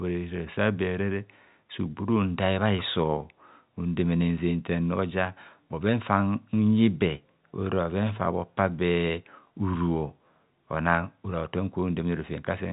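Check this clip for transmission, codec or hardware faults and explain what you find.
No transmission, codec or hardware faults turn up anywhere in the speech. The G.711 telephone coding can be heard as a band limit with nothing above about 3.8 kHz, along with at most a faint quantisation hiss that rises and falls with the level of the speech.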